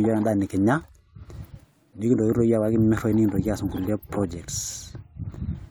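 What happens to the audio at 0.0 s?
Nothing goes wrong at 0.0 s; the audio is intact at that moment.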